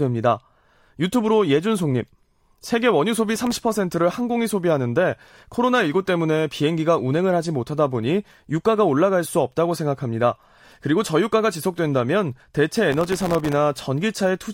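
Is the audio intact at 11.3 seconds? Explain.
Yes, at 11.3 seconds the speech plays through intact, with no dropout, click, distortion or other fault audible at that moment.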